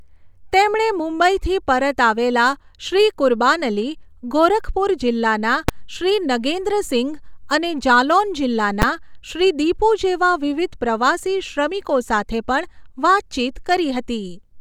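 At 5.69 s, after "કુરબાન અલી ગોરખપુર જીલ્લાના", and at 8.82 s, after "શ્રી નગેન્દ્રસિંઘ અને જાલૌન", invalid numbers at full scale produce a single loud bang. A calculation yielded infinite or invalid values that were clamped to the maximum level for 5 ms and 10 ms blocks.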